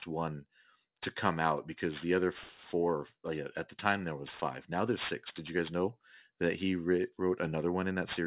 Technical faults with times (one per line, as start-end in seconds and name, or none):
0.00-8.26 aliasing